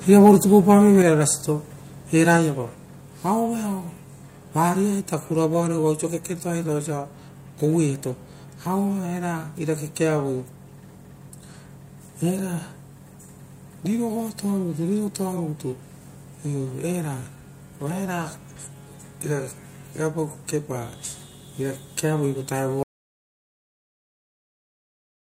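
Between 0.25 and 0.29 s the loudest peaks turn harsh and crackly, their tops flattened for around one in twenty samples, about 2 dB past the ceiling. This is likely microphone overload, with input gain set so high that the converter ran out of headroom.

At 1.02 s the speech and the background both drop abruptly by about 5 dB, and at 2.37 s they drop again by about 2 dB. This microphone volume stepped down in two stages, likely the call software cutting device input gain after the distorted peak.

From 22.83 s to the end the speech cuts off into silence with no room tone. This audio dropout to silence likely comes from the input being lost, with the recorder continuing to write silence, so everything after that point is gone.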